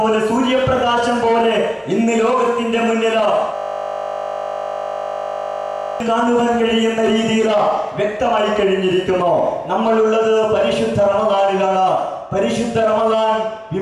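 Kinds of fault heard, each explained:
System hang loop: the system froze while the hardware kept replaying one 20 ms buffer, repeating it about 120 times as a steady 50 Hz buzz.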